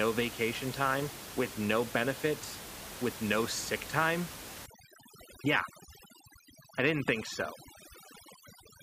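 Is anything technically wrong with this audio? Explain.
Yes. From 4.66 s to the end, right after "with no sick time", overdone noise removal cuts every frequency band near the noise estimate, leaving near-silent gaps with twinkling specks. On a spectrogram the background goes blank with scattered bright dots and the speech harmonics look patchy.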